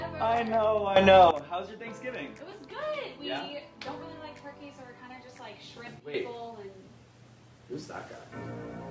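From start to finish there's gain pumping: the level ducks by around 5 dB whenever something loud comes in. Loud and quiet parts sit squashed close together. The likely cause is mic gain set far too high with a fast limiter or compressor clamping down on each peak. The call's mic processing tops out at 8 kHz, which is expected.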